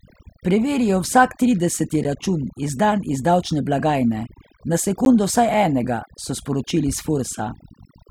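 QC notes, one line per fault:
Throughout, overdone noise removal: the background drops and breaks up into twinkling specks, as quiet bands are cut along with the noise.
2.04 s and 5.05 s, gap between chunks: short holes of 12 ms each, 3 s apart, where silence sits at the joins between 3-second chunks.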